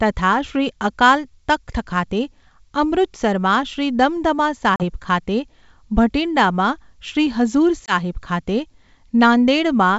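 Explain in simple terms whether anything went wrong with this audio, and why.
Twice the sound drops out abruptly: a short hole of silence around 4.76 to 4.84 s, and a briefer one around 7.87 to 7.94 s. This is packet loss on an ADPCM call. The speech travels in small data packets over wideband G.722 telephone coding, and some never arrived: about 40 ms of audio the first time, which points to a couple of packets, and 20 ms the second, likely a single packet. The missing audio was filled with silence. The decoder rebuilds each sample by predicting from the previous ones, so after a gap it is briefly out of step with the sender and needs a moment to settle.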